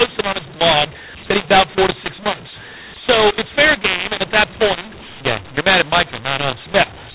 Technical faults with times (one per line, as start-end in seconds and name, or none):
0.00-7.15 mu-law and A-law mixed up